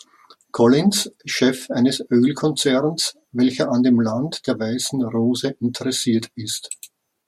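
A speech recording with no audible technical faults.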